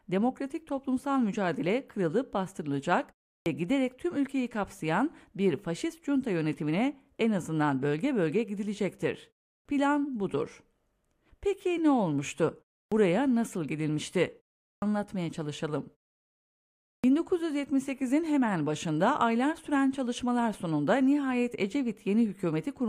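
Clipped start after a pause occurs in this speech at 3.41, 9.6, 12.86, 14.76 and 16.98 s: after silences of 0.31 to 1.1 s, the first 50 to 61 ms of sound is swallowed, so the phrase after "toplumsal mücadele kırılıp bastırılacak", for instance, begins abruptly because the output device was still waking or relocking.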